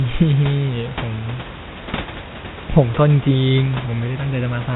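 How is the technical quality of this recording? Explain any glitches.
Listening closely, nothing in the recording stood out as a glitch or technical problem.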